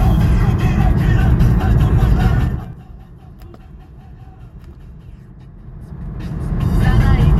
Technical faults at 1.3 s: none

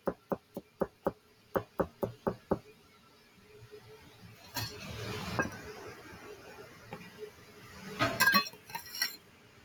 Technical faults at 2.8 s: noise suppressor applied to music or sounds; sound cut by the noise suppressor

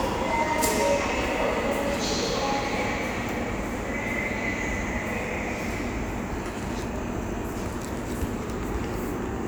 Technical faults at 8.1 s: none

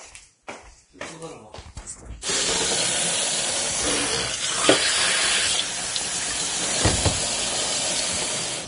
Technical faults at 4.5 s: Vorbis compression

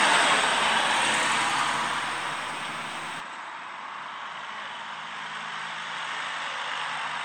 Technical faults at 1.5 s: none

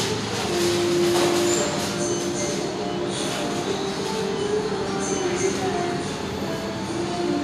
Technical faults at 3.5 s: none

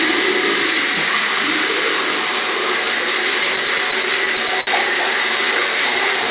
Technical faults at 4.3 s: repeated stalls (stutter)

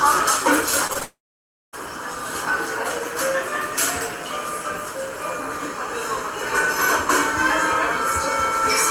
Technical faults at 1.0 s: short concealed packet loss; long network dropout

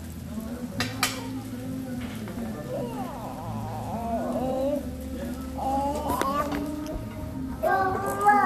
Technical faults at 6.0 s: none

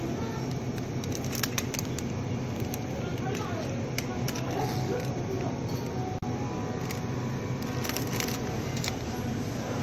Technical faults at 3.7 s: none

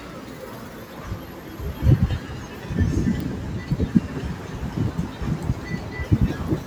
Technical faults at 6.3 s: noise suppressor applied to music or sounds

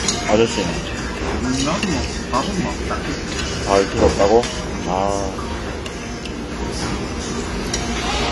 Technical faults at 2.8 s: AAC compression

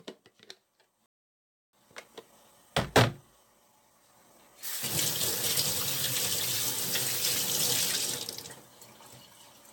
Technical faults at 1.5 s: generation loss; playback stall

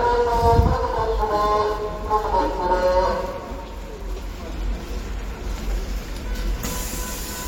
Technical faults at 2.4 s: none

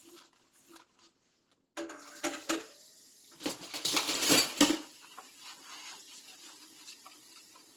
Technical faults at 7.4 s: Opus compression

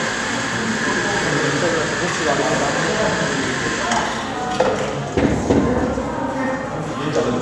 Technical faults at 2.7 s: none

